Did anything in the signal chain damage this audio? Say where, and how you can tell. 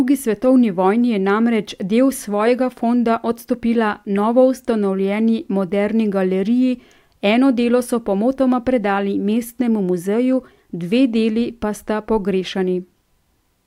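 No, nothing in the signal chain damaged this recording.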